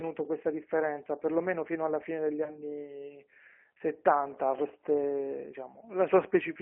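Speech that sounds thin and slightly rough and synthetic throughout, boxed into a narrow telephone band from about 250 Hz up to 3.4 kHz, with nothing of the upper range left. That plainly audible roughness comes from the G.729 codec (the G.729A variant, which fits an 8 kbit/s stream). It rebuilds each frame from a vocal tract filter, a pitch predictor and a handful of pulses, so fine detail is approximated rather than carried. From 2.44 s to 2.61 s the speech smears into a brief, fading stretch of buzz or coloured noise and stays weak and distorted for a moment afterwards. This is VoIP packet loss concealed by the speech codec. Roughly 20 ms of audio went missing, which fits a single lost packet. The decoder filled the gap by extending its last pitch and filter with falling gain, and because each frame builds on the one before it, the damage carries on for tens of milliseconds or more beyond the gap itself.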